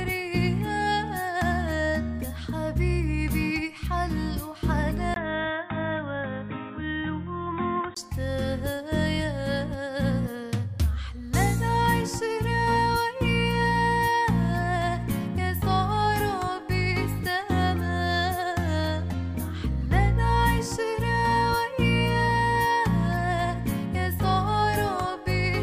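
At 5.14 s, after a 20 ms gap, the sound turns dull and boxy, with nothing above 3.8 kHz and a faint new noise floor well below it, at an unchanged level, until 7.97 s. This points to an input switched to a poorer device, likely a narrowband alternate input.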